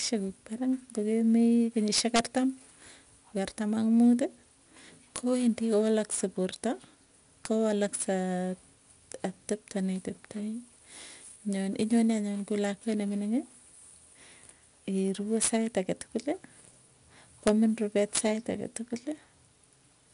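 Speech runs through 4-bit ADPCM compression from start to finish. Each sample is coded as a small step from a predicted value, and the step size adapts as it goes. The coding error rides on the signal's level. Every loud syllable carries a gritty hiss, and sharp attacks smear where the step cannot grow quickly enough. Nothing is heard above 10.6 kHz. That dull top fits a 22 kHz sample rate at roughly 88 kbps.

Integer overflow strikes six times. The first is at 1.98 to 2.19 s, then 5.16 to 5.18 s, 7.45 s, 15.42 to 16.01 s, 17.47 s and 18.15 to 18.19 s. At each, a gain or sum exceeded the largest integer. Instead of limiting, it wrapped to the opposite sign. The peaks went over by about 1 to 3 dB, and by about 6 dB at 18.15 s. Each excursion flips across the full range. It is heard as a violent crack, far harsher than clipping.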